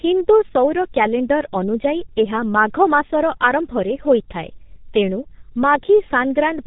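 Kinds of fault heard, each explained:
G.723.1 codec: The speech runs throughout the clip through this very-low-rate telephony codec, and the sound points to a rate of about 6 kbit/s. Each 30 ms frame is rebuilt from a coarse vocal-tract model, so the speech comes out heavily muffled and hoarse, with consonants smeared. On a spectrogram the energy stops flat at 3.8 kHz with nothing above it, and harmonics look blurry and blocky. The waveform looks smoother than natural speech.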